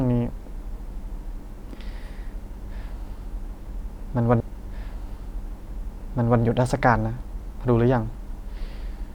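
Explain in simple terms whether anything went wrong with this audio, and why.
Something did go wrong here: a stream segment repeated. Between 4.40 s and 6.42 s, about two seconds of the speech play a second time, so the listener hears the same stretch twice in a row. This happens when the playback software fetches or queues the same chunk of the stream twice and plays both copies. At the point where it jumps back to replay the chunk, a small blip marks the join.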